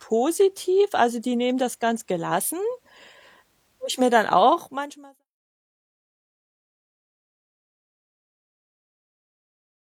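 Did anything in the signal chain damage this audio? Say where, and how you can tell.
No, nothing in the signal chain damaged this audio, and the smooth fade-out of the speech, starting around 4.5 s and complete by 5.25 s, is an ordinary edit.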